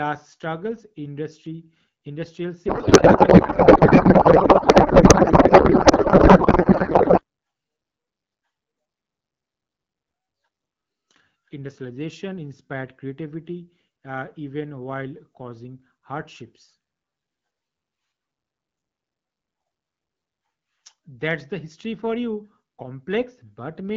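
From 2.68 s to 7.23 s the speech gives way to garbled noise and warble that barely tracks it: a codec payload misread, where octet-aligned AMR frames are parsed as bandwidth-efficient, shifting every field. Around it the AMR-WB stream sounds clear, fitting 12.65 kbit/s.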